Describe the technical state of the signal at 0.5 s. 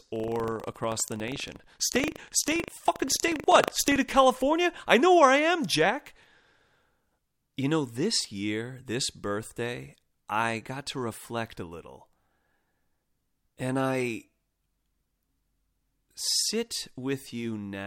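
At 0.5 s the speech is affected by buffer tearing, running from 0.00 to 3.96 s. The writer and reader of the playback ring buffer have slipped, so each 40 ms period carries a small slice of audio roughly 70 ms stale, producing a rough 25 Hz rattling buzz under the speech.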